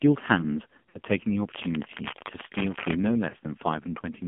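Throughout, the speech carries heavy damage from the AMR narrowband mobile codec. Its buzzy, synthetic quality points to a low bitrate near 6 kbps, and a spectrogram shows nothing outside roughly 150 Hz to 3.4 kHz.

From 0.90 to 0.99 s, lost AMR speech frames leave about 40 ms of smeared, fading sound, fitting two missing 20 ms frames. The waveform shows a brief decaying stretch before recovering.

From 1.53 to 2.94 s, dense, uneven scratching rides over the speech, roughly 10 dB below it. This is cable scratch noise, likely from a worn connector or cable being moved. A spectrogram shows it as ragged broadband speckle.

From 3.30 to 3.36 s, another 40 ms of lost AMR speech frames produces the same drawn-out dip, visible as a short, shrinking envelope.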